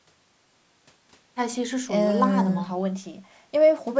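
No technical faults can be heard anywhere in the speech. The call microphone processing it went through shows only in a top end that stops at about 8 kHz and a trimmed lowest bass, both normal for that path.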